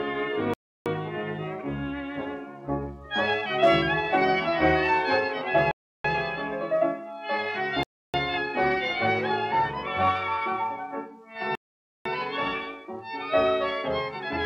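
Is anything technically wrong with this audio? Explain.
Yes. Bluetooth stall at 0.54, 5.71, 7.83 and 11.55 s: the sound cuts to silence for about 0.3 s each time (0.5 s at the last), then resumes. This is likely because interference delayed packets until the headphone buffer ran dry.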